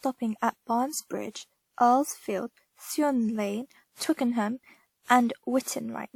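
A speech recording with a swirly, hollow smear across the whole clip: consonant attacks blur, and a watery, phasey texture sits over everything, with content reaching up to about 20.1 kHz. The likely cause is generation loss, with the audio decoded and re-encoded around five times through a lossy codec, consistent with WMA at 96 kbit/s. Each pass requantises on a shifted frame grid, so noise and spectral gaps build up beyond what that bitrate alone would produce.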